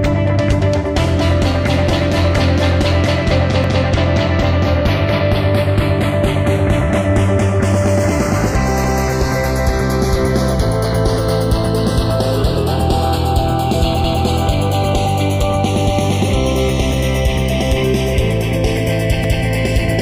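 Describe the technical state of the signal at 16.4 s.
At 16.4 s the channels are drifting apart, as they do throughout: the two sides run on clocks a couple of tens of parts per million apart, so their offset keeps growing toward 0.4 ms. Heard in mono, comb notches sweep slowly, giving slow flanging.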